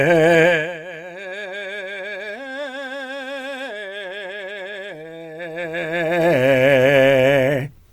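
Music, with no technical faults to be heard.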